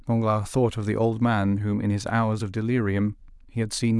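No audible faults in this speech.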